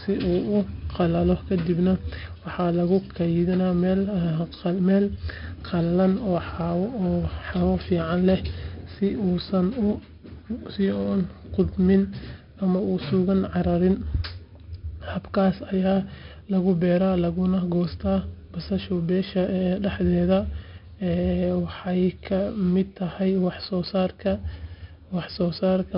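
Throughout the speech, the signal has been stored with 4-bit ADPCM compression: each sample is kept only as a coarse 4-bit step from a predicted value, with a step size that adapts as it goes, at a rate that fits about 44 kbps. The damage is heavy. Gritty, level-following hiss rides on every loud syllable, sharp onsets smear and distort where the step size lags, and nothing survives above 5.3 kHz, so the sound is dull.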